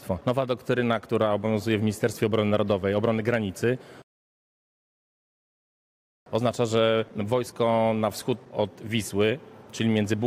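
A rebuffering stall runs from 4.02 s to 6.26 s. The player's supply of downloaded audio ran dry, so playback halted and waited for more data before continuing. The sound cuts abruptly to silence, holds there for about 2.24 s, then picks up at exactly the point where it broke off. No material is skipped or repeated; the gap simply inserts 2.24 s of extra time into the timeline.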